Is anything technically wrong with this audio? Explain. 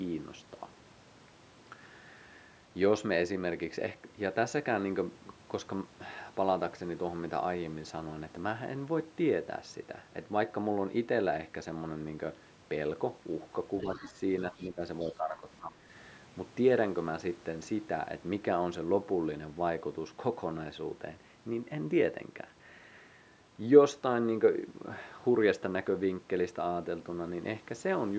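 Yes. Two related faults cluster between 13.8 and 15.8 s.

Other side's voice leaking through at 13.8 to 14.12 s, 14.56 to 14.67 s and 15.01 to 15.1 s: faint scraps of a second voice, roughly 20 to 30 dB under the talker, likely residual loudspeaker echo the canceller missed.

Speech suppressed in double talk at 13.83 to 14.16 s, 14.52 to 14.81 s and 15.04 to 15.8 s: the talker dips by roughly 10 to 15 dB, likely because the canceller attenuated everything while both sides spoke.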